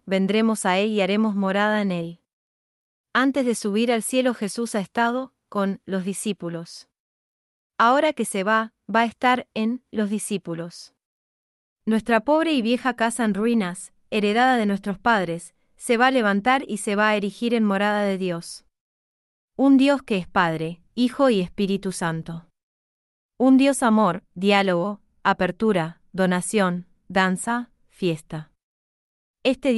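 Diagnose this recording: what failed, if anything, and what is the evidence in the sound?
Nothing in the chain seems to have failed here. I can't hear a dropout, click, distortion or glitch at any point that would point to a problem at any stage.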